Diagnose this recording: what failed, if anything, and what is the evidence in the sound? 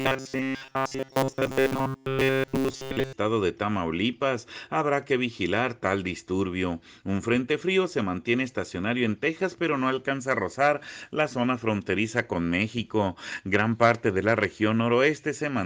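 From 0.01 to 3.13 s the sound turns into a stiff, metallic buzz fixed at 133 Hz. That's robotic sound from repeated short buffers, likely a starved driver or buffer stage looping roughly 7.5 ms chunks and replacing most of the real audio.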